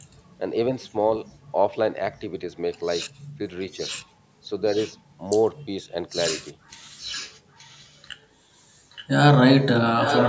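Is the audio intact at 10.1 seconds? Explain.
No. An echo leak runs from 9.99 s to the end of the clip at 10.28 s, so 10.1 s falls inside it. A delayed copy of the speech, arriving about 874 ms after the original and about 5 dB quieter, sits on top of the direct sound. The likely cause is a far end playing the call over a loudspeaker, where the echo canceller failed to remove what its microphone picked up and sent that pickup back down the line.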